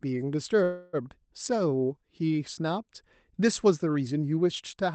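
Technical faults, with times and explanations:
0.63–0.96 s: call audio freeze. The sound stalls for about 0.3 s, filled with a fading continuation, then resumes intact, likely from packets delayed until the jitter buffer ran empty.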